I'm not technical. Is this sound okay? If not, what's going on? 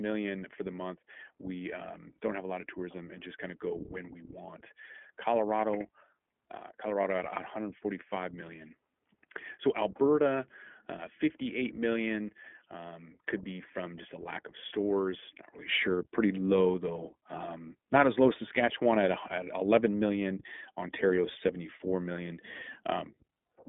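No. From the start until about 15.7 s, the sound is duller, a little quieter and slightly boxier, with a faint background hiss. At 15.7 s it brightens at once, with no gap. The likely cause is the input switched to a poorer device, such as a headset's call mode.

All the way through, the speech also sounds plainly rough and synthetic, with nothing above about 3.8 kHz. That points to the iLBC codec, a phone-call format that compresses speech in short 20 ms chunks and throws away the higher, brighter sounds.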